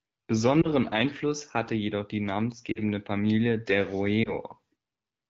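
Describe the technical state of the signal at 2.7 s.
Lost AMR speech frames at 2.72 to 2.79 s, after "hatte jedoch die". About 40 ms failed decoding. The decoder repeated previous parameters with falling gain, so the sound drops to near silence.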